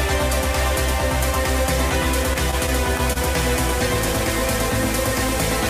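From 2.33 to 3.17 s, packets arrive late and the jitter buffer keeps running dry, causing repeated stalls (stutter). Five brief holds, the longest 28 ms, stretch the last sound forward, about 81 ms in all, so the audio drags and hiccups while losing nothing.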